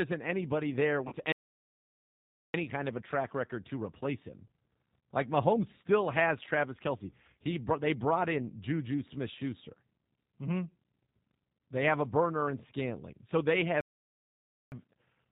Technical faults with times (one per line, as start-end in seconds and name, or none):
0.00-15.31 G.729 codec
1.08-1.14 VoIP packet loss concealed by the speech codec
1.32-2.54 playback stall
13.81-14.72 playback stall